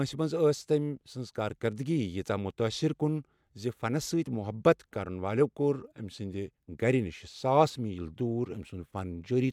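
Nothing faulty turns up anywhere in this speech recording. There is no point in the audio where anything goes wrong.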